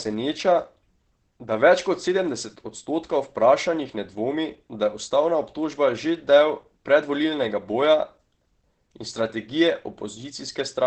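A speech recording with heavy Opus compression damage running throughout: the sound is muffled and hoarse, with the top end cut away so that nothing remains much above 8 kHz. This is likely the codec's SILK speech mode at wideband bandwidth, which models the voice with a low-rate predictive coder instead of keeping full band energy. The depth of the degradation fits a bitrate of around 12 kbps.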